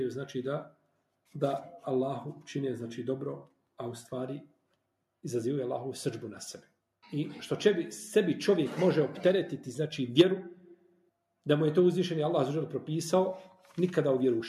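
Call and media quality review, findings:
Sound cut by the noise suppressor, 0.68–0.90 s and 10.55–11.10 s. Suppressor misclassifies steady or decaying content as noise, pulling it down about 12 dB and about 13 dB. Level sags, tails shortened; roughly a fifth and half a second affected.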